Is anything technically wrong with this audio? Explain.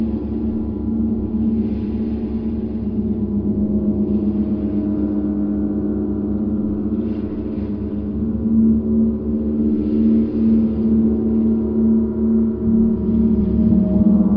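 No, nothing technically wrong.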